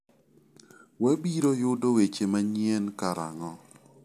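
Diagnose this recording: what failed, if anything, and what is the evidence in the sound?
Nothing in this recording failed.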